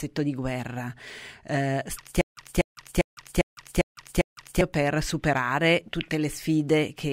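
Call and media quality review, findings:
Stutter with silent gaps, 2.21–4.61 s, after "di guerra eh", before "per superare": a 242 ms speech fragment repeats six times, 158 ms of dead silence between, every 400 ms. Likely a stalled player or stream buffer replaying its last chunk; the intended audio is lost.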